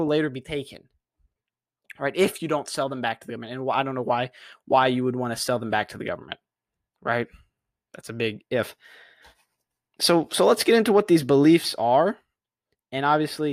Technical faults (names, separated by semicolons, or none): none